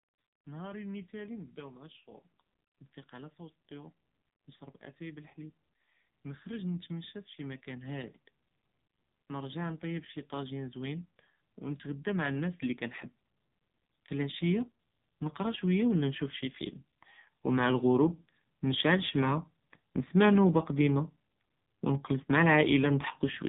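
From the start the speech carries the AMR narrowband mobile codec sound. Nothing above 3.8 kHz survives, and the voice is buzzy and synthetic, with a pulsed, vocoder-like edge that points to one of AMR-NB's lowest rate modes, around 6 kbps. Because the codec rebuilds the voice from a vocal-tract model and a few excitation pulses per subframe, the damage is tonal coarseness rather than the muffled dullness of a simple low-pass filter or the chirpy smearing of a wideband music codec.

From 9.27 s to 12.9 s the automatic gain is rising. The gain control judges the input too quiet and turns itself up, lifting the level by about 7 dB over those three and a half seconds. Voice and background swell together, which separates it from a speaker moving closer, where the voice alone would grow. It also differs from a volume step, as the climb is slow and steady rather than abrupt.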